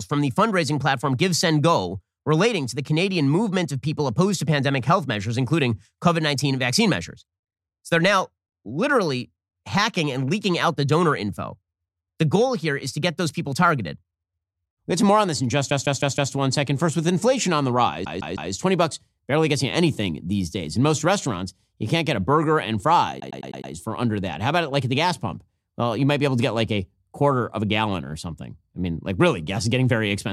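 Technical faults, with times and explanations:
15.69–16.32 s, 18.04–18.51 s, 23.19–23.71 s: repeated frames. A 157 ms block replays four and three extra times, then a 105 ms block five extra times, so the sound stutters. The spectrogram shows identical patches side by side.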